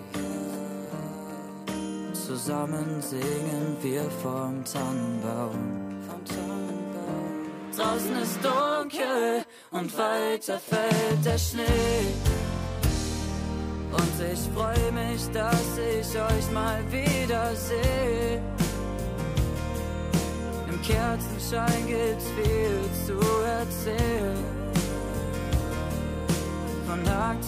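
A USB whine runs through the whole recording: a fixed 1 kHz tone, roughly 35 dB below the audio, from the bus's 1 ms frame current leaking in through power or ground. A spectrogram shows a steady horizontal line at 1 kHz from start to end.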